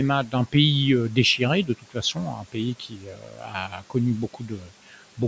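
Speech cut by the noise suppressor, at 1.66–1.96 s just after "pays euh déchiré", then 2.36–2.56 s, 2.8–3.95 s and 4.34–4.96 s: the suppressor mistook parts of the speech for noise and turned them down by about 11–12 dB, so those syllables sound swallowed and faint.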